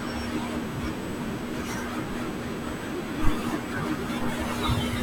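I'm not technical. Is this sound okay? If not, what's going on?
No. A faint, steady high-pitched whine runs under the speech the whole way through. This is USB whine, electrical noise from the computer's USB connection, pitched at 8 kHz.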